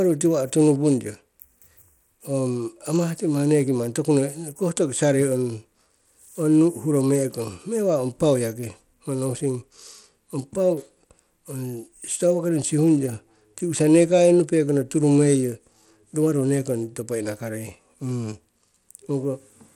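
Speech throughout, with plainly audible Bluetooth SBC compression: the treble flickers, gritty aliasing noise rides on the sound, and nothing reaches above 19.5 kHz. This damage fits a low-bitrate stream around 96 kbps and is likely caused by Bluetooth SBC, which gives the weak top bands few or no bits. The coarse, gritty sub-band quantisation sets it apart from the swirly, watery artefacts of MP3 or AAC.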